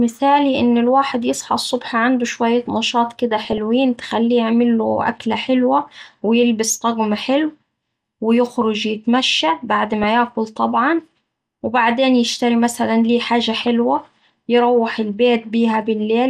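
Speech here, and the whole thing sounds dull and plainly gurgly and grainy, with the top end dropping in and out. That's likely MP2 compression starved of bits, which fits something around 80 kbps, where upper sub-bands get switched off and the rest are coarsely quantised. On top of that there's DAB burbling: short blips at 3.45–3.58 s, between "عنده شوية نشاط كدا" and "تخليه يعمله أكلة حلوة"; at 9.94–10.04 s, between "ويخرج يتمشا بعد" and "ياكل طبعا وبعدين يشتري"; at 13.55–13.68 s, right after "يشتري مثلا ليه حاجة"; and a tiny one at 15.74 s. That's bit errors, roughly a tenth to a fifth of a percent, slipping past error correction and putting short blips of noise into single sub-bands.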